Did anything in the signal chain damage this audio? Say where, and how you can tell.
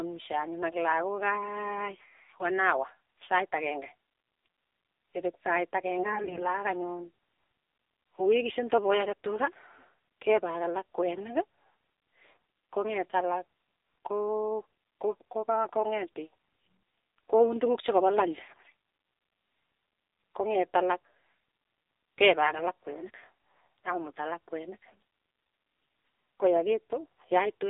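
Yes. Throughout, the speech sounds buzzy and synthetic and is confined to a narrow band, roughly 300 Hz to 3.7 kHz, with nothing above 4 kHz. That is the AMR narrowband mobile codec at the codec stage. Its vocal-tract model at a low rate, which fits about 7.4 kbps, strips detail.

At 5.98–6.46 s, 18.44–18.72 s and 24.86–24.95 s, just after "alak kwenik", the voice keeps its pitch and level but turns hoarse, scratchy and gargly. These are AMR bit errors from a weak network link. Flipped, lightly protected bits misplace the excitation pulses and skew the finer parameters.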